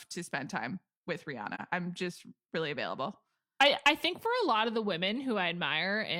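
From 1.55 to 1.61 s, AAC frame loss with muting leaves a brief dip in the speech. It fits one dropped frame zeroed by the decoder, with overlapping windows fading out and in.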